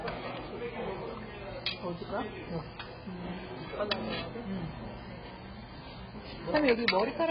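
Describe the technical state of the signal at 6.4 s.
At 6.4 s the signal carries AAC compression damage that runs through the whole clip, with likely cause an AAC-LC encoder starved of bits. The sound points to a very low bitrate, around 12 kbps, so the encoder discards most spectral detail and cuts everything above 5.4 kHz. The audio comes out dull and muffled, with heavy smearing and a warbling, fizzy texture wherever the sound sustains.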